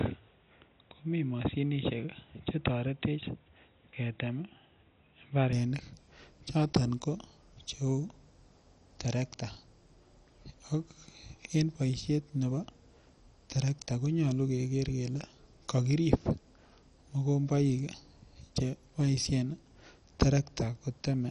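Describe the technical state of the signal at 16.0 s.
At 16.0 s the speech carries the same damage heard from start to finish, most likely MP2 compression. MPEG Layer II divides the signal into 32 sub-bands and shares out a small bit budget; starved bands drop out and the survivors are coarsely quantised, which fits a rate near 48 kbps. The result is dull, gurgling and granular. A spectrogram shows a hard ceiling at about 11.3 kHz, with blocky, flickering patches in the upper bands below it.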